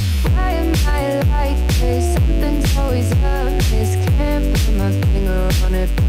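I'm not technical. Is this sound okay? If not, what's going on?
No, there's a problem. From start to finish, a steady, raspy buzz sits underneath the sound, noticeable but quieter than the sound itself. This is mains buzz. It happens when electrical interference from the power supply leaks into the recording, for example through a light dimmer, a charger or a cable that isn't properly shielded. Here it's tied to 60 Hz power, and its sharp pulses spread up into high, gritty overtones.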